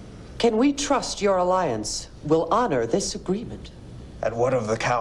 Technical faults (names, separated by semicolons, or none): none